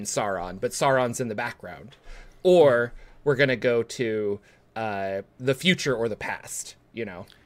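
From 0.14 s to 7.39 s the speech carries a faint, regular ticking, roughly ten times a second and around a hundred ticks in all, clearest over the louder, sustained parts. These are clock slip clicks, likely from two devices running on unsynchronised clocks about a couple of hundred parts per million apart, so each time the drift reaches a full sample, one sample is dropped or repeated, leaving a tiny step in the waveform.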